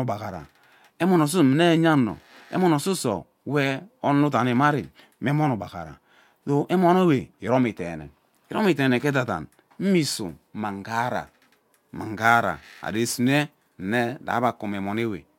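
Sample clock jitter from 10.88 s onward: converter timing wobbles by a few microseconds, adding hissy roughness about 25 dB below the speech, strongest on loud, bright sounds.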